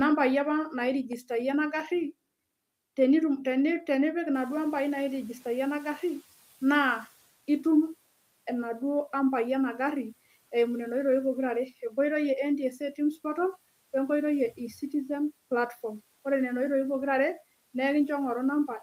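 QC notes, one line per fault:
4.34–7.17 s, noise suppressor catching up: the room noise in this speech clip jumps by about 13 dB at roughly 4.5 s and initially passes through with little reduction, because the suppressor's noise estimate still reflects the quieter level. Over about 2.8 s the estimate adapts and the noise sinks by about 9 dB, leaving it about 31 dB below the speech. This is a single, steady settling after the jump, not pumping or gating that rises and falls with the speech.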